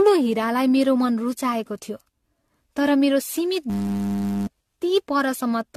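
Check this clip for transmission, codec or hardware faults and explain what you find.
Two faults are present.

Generation loss, throughout: the audio was likely decoded and re-encoded about seven times with AAC-LC, which fits roughly 64 kbit/s. This leaves swirly, hollow speech with blurred attacks and nothing above 14.1 kHz.

System hang loop, 3.70 to 4.47 s, just after "मेरो सीमित": the system froze while the hardware kept replaying a 10 ms buffer. This produces a steady 100 Hz buzz in place of about 0.7 s of speech.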